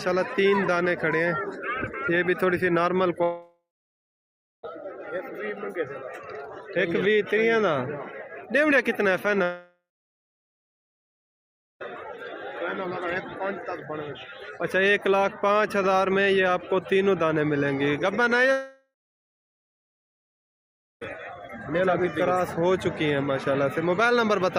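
The audio cuts out three times, at 3.23 to 4.65 s, 9.43 to 11.82 s and 18.52 to 21.03 s. Each time a fading buzz carries on briefly, then silence. About 1.4, 2.4 and 2.5 s of sound are lost. This is likely a long network dropout.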